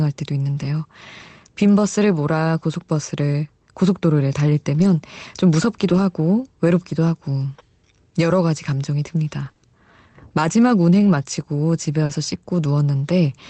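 Lost packets rebuilt from error correction at 0.53–0.67 s, 4.79–4.85 s and 5.89–5.99 s: the speech carries on without a gap, but in each of these moments it turns briefly rougher and noisier. Each lost stretch was replaced by a low-bitrate copy carried in the following packet, filling 80 ms, 40 ms and 60 ms respectively. The speech is limited to about 8 kHz, which fits a wideband Opus call at a modest bitrate.

Scattered short gaps between 9.45 and 12.11 s: around four small holes, the longest about 40 ms, were patched by extending the preceding sound. Together they fill about 100 ms and are heard as brief ticks and smeared hiccups.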